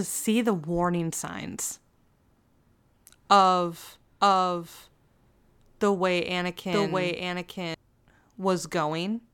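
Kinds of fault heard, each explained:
Doubled audio track: From 4.21 to 7.75 s the speech is heard twice, a second full-band copy trailing about one second behind and somewhat quieter. It has no room tail and cuts in and out abruptly. A slower second capture path or misaligned edit is the likely cause.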